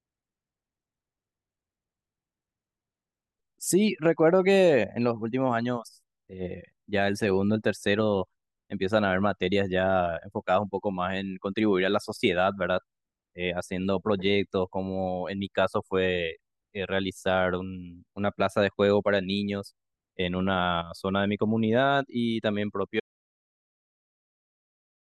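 An audio dropout to silence begins at 23.0 s and runs to the end of the clip, about 2.1 s in all. The speech stops abruptly mid-flow and is replaced by silence, with no room tone or background hiss underneath. That flat, empty gap is most likely an input that was lost, through a disconnected device, a broken link or an accidental mute, while recording carried on writing silence. Whatever was spoken in those final seconds is gone.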